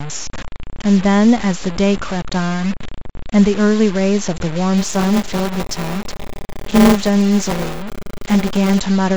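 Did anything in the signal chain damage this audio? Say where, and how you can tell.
Yes. Throughout the speech there is grainy distortion that rises and falls with the voice, sitting only about 15 dB below the signal. That points to a sample-format conversion stage, likely truncation to about 5 bits without dither. Unlike steady dither or codec hiss, this error tracks the signal.

From 4.77 to 8.80 s a robotic 200 Hz buzz rides on the speech and drops out whenever the voice pauses. This is buffer tearing at the driver or buffer stage. About a fifth of each 5 ms period replays audio roughly 10 ms old, with hard joins on either side. Dropouts would leave gaps, but tearing leaves none.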